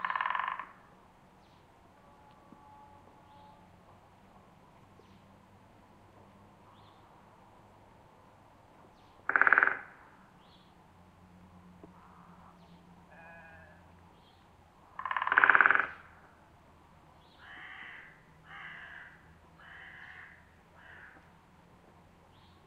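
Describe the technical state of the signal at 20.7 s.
At 20.7 s the signal is intact, with no audible fault at that moment.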